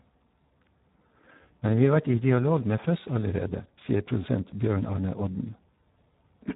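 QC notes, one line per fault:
Throughout, Speex codec: the sparse CELP excitation makes the speech hoarse, noisy and nearly robotic, which fits about 8 kbps. Nothing remains above 3.8 kHz.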